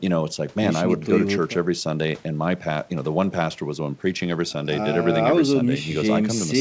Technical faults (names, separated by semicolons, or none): none